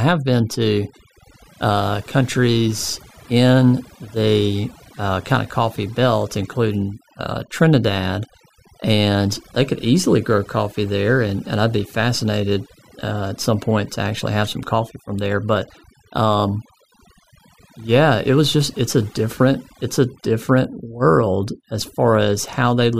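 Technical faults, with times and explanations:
Throughout, overdone noise removal. The noise reduction was set too strong. Frequency bands near its noise estimate are pushed down or cut entirely, and quieter parts of the speech vanish with them. The background drops and breaks up into twinkling specks.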